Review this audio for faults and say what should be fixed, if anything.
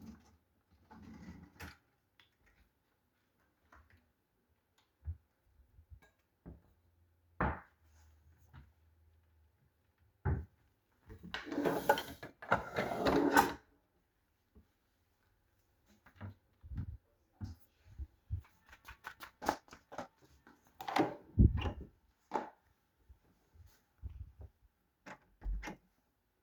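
From 18.37 to 20.29 s there's a time-stretched section: it runs at double speed with unchanged pitch, sounding rushed, likely from stretch software dropping short chunks. Render it at its natural length, or trim material instead of stretching it.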